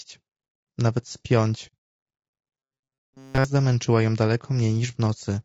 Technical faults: low-delay AAC compression; AAC frame loss with muting; robotic sound from repeated short buffers

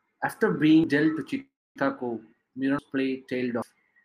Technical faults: dropped buffer (overrun); call audio freeze

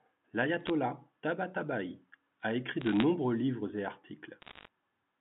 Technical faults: bit errors on a digital phone line

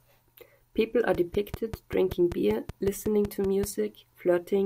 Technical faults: train of clicks

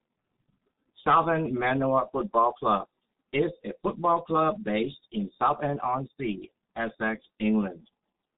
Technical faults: G.723.1 codec

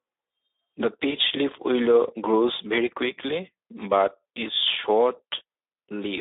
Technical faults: Speex codec; VoIP packet loss concealed by the speech codec

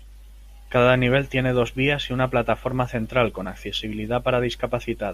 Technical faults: none

